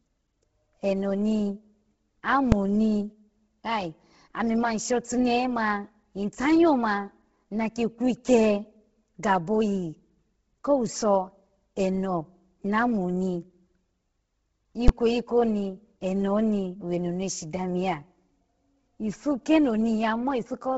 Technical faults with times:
0.00-20.77 Bluetooth LC3 compression
2.52 invalid numbers at full scale
14.88 invalid numbers at full scale

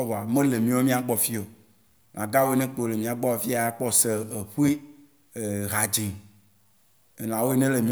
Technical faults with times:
0.00-7.92 low bit depth without dither

